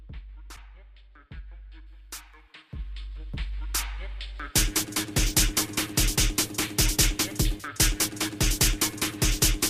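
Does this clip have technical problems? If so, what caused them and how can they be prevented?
Yes. From 1.86 s to the end, the sound turns thin, bright and sibilant, with sibilant edges standing out sharply. This is pre-emphasis left on: the treble was lifted along the FM 75 µs curve and the matching de-emphasis was never applied on playback. Highs sit about 13 dB above the 1 kHz level at 10 kHz, which is why the top end dominates. To prevent it, make sure the playback or capture chain applies the matching 75 µs de-emphasis.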